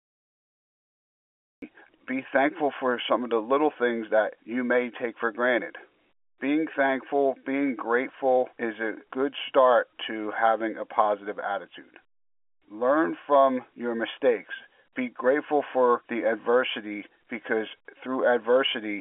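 Cut-off start: digital silence runs until 1.62 s, then speech enters abruptly mid-sound with no natural attack, because the recording began late.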